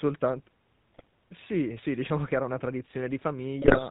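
Throughout, the speech has a buzzy, gravelly roughness with nothing above 4 kHz, the plainly audible sound of the GSM full-rate codec, consistent with 13 kbps.

From 0.94 to 1.04 s and again from 3.62 to 3.88 s, the voice breaks into squawks, pops and gargling: GSM bit errors corrupting the filter, pitch and gain values.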